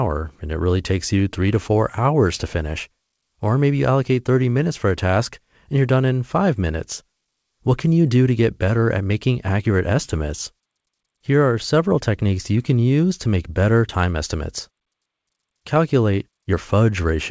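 No technical faults are audible.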